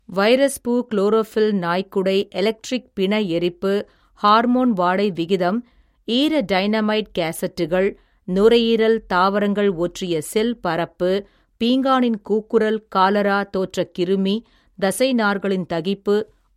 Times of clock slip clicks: 0.14-16.50

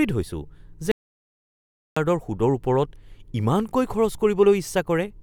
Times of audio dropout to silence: 0.91-1.96

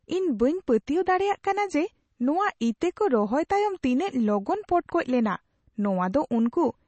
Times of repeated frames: none

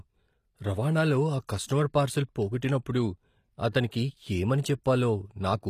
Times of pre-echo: 1.47

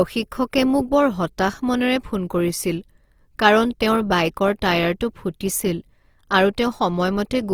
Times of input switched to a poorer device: none

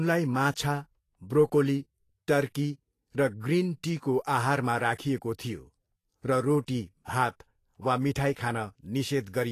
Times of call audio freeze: none

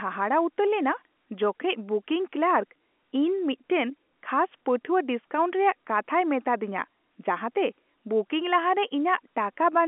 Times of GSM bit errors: none

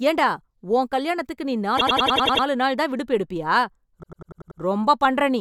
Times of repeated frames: 1.76-2.44, 4.02-4.60

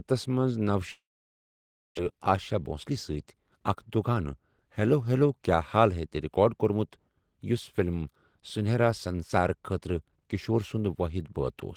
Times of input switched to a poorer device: none

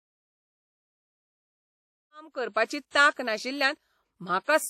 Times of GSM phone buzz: none

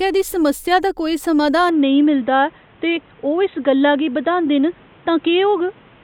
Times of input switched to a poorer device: 1.69-6.04

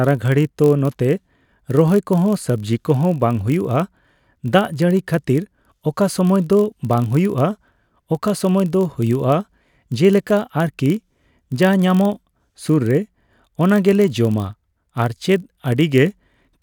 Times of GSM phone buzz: none

